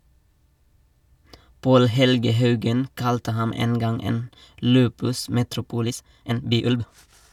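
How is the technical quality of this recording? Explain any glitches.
There's one glitch, in the last second and a half of the speech. From 5.81 s to the end, there's a time-stretched section: the pace jumps to nearly twice as fast (about 1.97x) while the pitch holds, so it sounds rushed. That's likely software squeezing the audio by dropping short slices.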